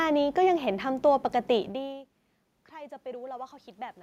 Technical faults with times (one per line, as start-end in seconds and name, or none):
1.73-3.98 automatic gain rising